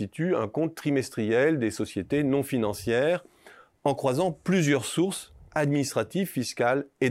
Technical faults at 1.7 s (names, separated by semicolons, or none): none